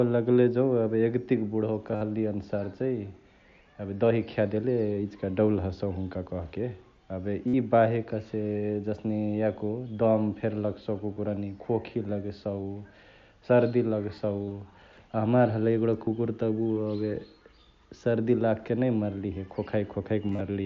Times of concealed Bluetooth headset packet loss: 1.92-2.01, 7.47-7.54, 11.13-11.17, 14.45-14.51, 16.05, 20.28-20.41

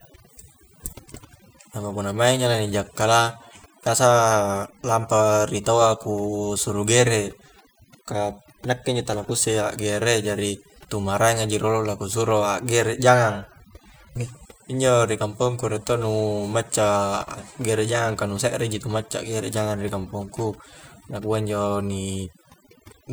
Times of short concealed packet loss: none

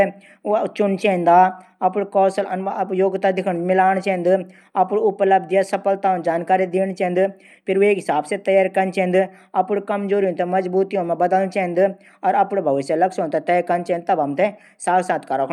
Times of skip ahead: none

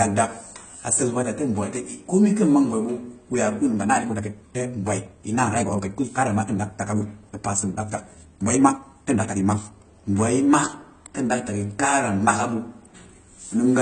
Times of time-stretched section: 3.65-9.77

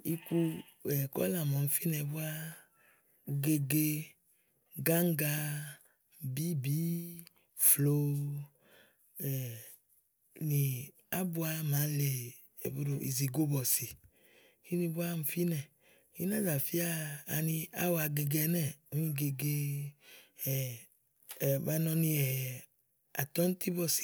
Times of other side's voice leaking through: none

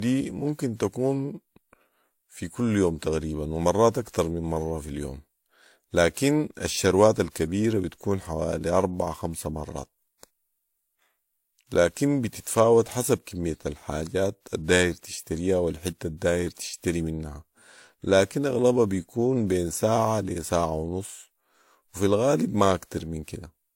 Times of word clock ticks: none

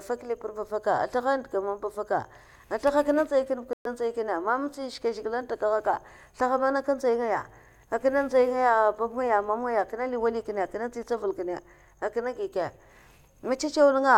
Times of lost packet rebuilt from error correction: none

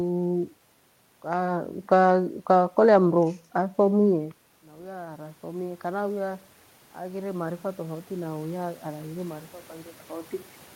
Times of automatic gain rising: 3.54-9.51

